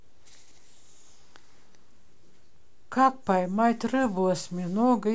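No faults can be heard anywhere in this speech clip.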